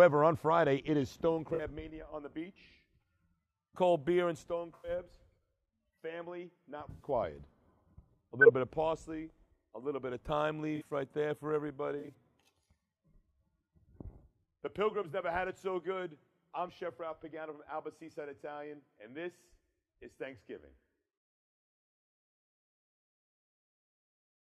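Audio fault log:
1.54–1.60 s, 4.75–4.90 s, 6.90–7.06 s, 10.76–10.90 s, 11.99–12.10 s: corrupt frame concealed. Each event spans from about 60 ms to about 160 ms. The decoder detected damaged compressed frames and covered them by muting or by substituting a sign-scrambled copy of the last good spectrum. The gap lengths suggest runs of two to six frames.
8.41–8.50 s: corrupt frame decoded. A burst of about 90 ms of misplaced energy peaks at about −10 dBFS. Damaged frame data was decoded without being detected, so misread gains and codes put energy at the wrong frequencies for the length of the affected frames. The duration suggests roughly three frames.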